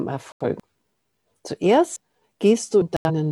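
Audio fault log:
0.32–0.45 s and 2.97–3.10 s, digital broadcast dropout. The sound cuts to silence for about 0.13 s each time, then resumes further on. The receiver lost the signal or rejected bad frames and muted. About 85 ms is gone each time, which fits two lost frames.
0.60 s, 1.96 s and 2.82 s, dropped buffer (overrun). There is no silence. There is an abrupt jump forward in the sound. The likely cause is samples overwritten before being read, with the ends joined. Roughly 0.3 s is skipped at the first two, 0.15 s at the last.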